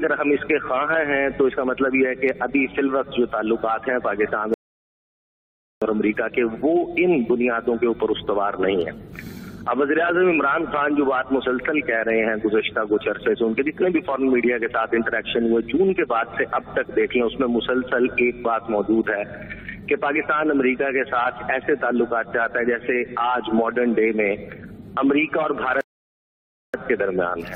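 Rebuffering stalls occur at 4.54 s and 25.81 s: playback runs dry, drops to silence for 1.28 s and 0.93 s, then resumes exactly where it stopped, losing nothing.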